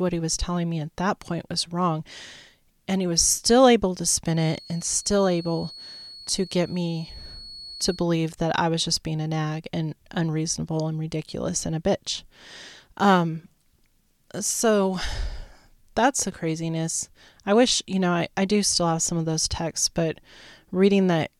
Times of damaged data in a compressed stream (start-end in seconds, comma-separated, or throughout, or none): none